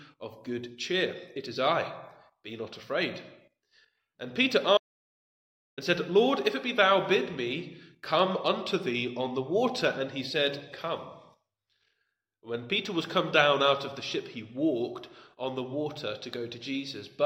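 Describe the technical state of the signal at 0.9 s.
At 0.9 s the signal is intact, with no audible fault at that moment.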